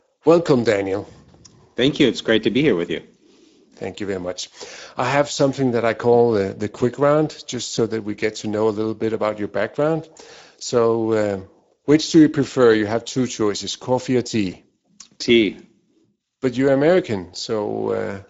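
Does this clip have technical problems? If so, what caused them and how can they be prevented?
Yes. The Speex codec is audible throughout as a hoarse, noisy roughness on the speech, which fits a bitrate around 16.8 kbps starving the excitation. It is steady across the whole clip, unlike the swirling, watery artefacts of a music codec. Encoding at a higher Speex quality, or using a wideband codec such as Opus, would prevent it.

VoIP packet loss concealed by the speech codec occurs at 7.75 to 7.81 s and at 14.51 to 14.57 s, right after "two choices coffee or". Each gap fits one lost 20 ms frame. Instead of a silent dropout, the decoder repeats its last pitch and filter, giving a brief, fading smear that stays weak for a moment after packets resume. A jitter buffer with forward error correction, or a more reliable network path, would prevent it.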